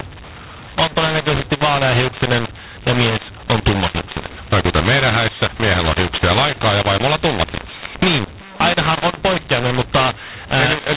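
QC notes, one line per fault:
throughout: mu-law and A-law mixed up. Mu-law telephone speech is decoded as A-law, scrambling levels. Speech sounds harsh and distorted; pauses fill with noise.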